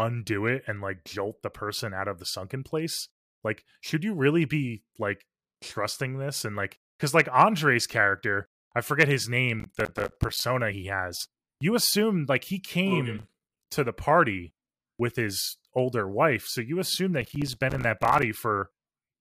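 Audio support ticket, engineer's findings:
Processor overload crackle at 9.60–10.40 s, 13.19–13.71 s (ending just before "to the party with") and 17.21–18.23 s (right after "wife so you assume"). Gritty tearing over the speech. Probable component: audio processing thread missing deadlines on small buffers, around 5 ms each. Dozens of consecutive misses, each dropped buffer output as silence with hard edges, so the gaps stack into crackle until the load eases.

Damaged data in a compressed stream at 10.71–10.73 s, just before "has you assume like". Short blip. Probable component: the compressed stream feeding the decoder. Corrupted bytes in that stretch make the decoder misread the frames and lose sync. It then hunts for the next valid frame header, which causes the brief glitch.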